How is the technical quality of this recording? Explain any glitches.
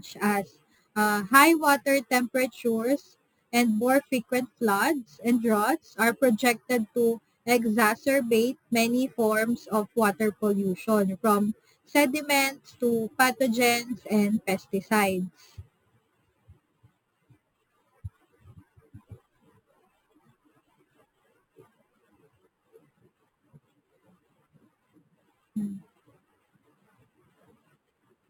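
The recording has one fault, present from start to finish: imaging from sample-and-hold upsampling. The speech appears to have been raised from a rate near 11 kHz by repeating each sample without a smoothing filter, so mirror copies of the spectrum sit about 16 dB below the signal. The first spans roughly 5.5 to 11 kHz, heard as a bright metallic fizz that rises and falls with the speech.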